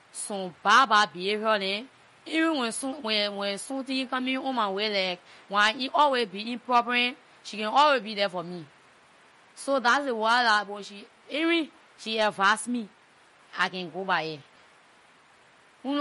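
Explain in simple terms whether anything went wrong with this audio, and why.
Yes: throughout the speech the treble is missing above 11.2 kHz, with a watery, swirly shimmer, likely from MP3 compression. A plain treble cut wouldn't warble like this.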